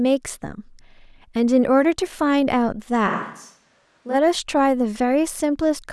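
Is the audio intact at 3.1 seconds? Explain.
No. At 3.09 seconds the speech suddenly turns roomy and hollow, with thinner bass, and it drops by roughly 5 dB. Background noise becomes audible, sitting around 35 dB below the speech. This is a switch to a distant microphone. The close microphone's signal likely dropped out, leaving a mic farther away that captures more of the room. The close sound returns just as abruptly at 4.13 seconds.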